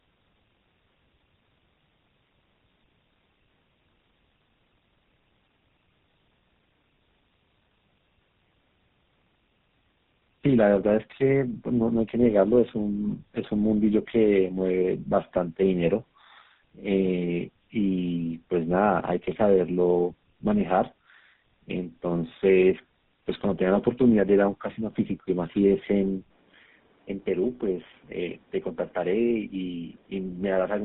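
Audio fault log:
throughout, tandem speech coding: two low-rate speech coders in series, fitting G.729A then GSM full rate, the second re-coding the first's damage, leaving rough, warbly speech with nothing above 3.8 kHz.
26.22–30.85 s, input switched to a poorer device: after an 80 ms gap the band narrows to 3.5 kHz, level drops about 5 dB, and fresh noise sits roughly 30 dB down, likely a different microphone.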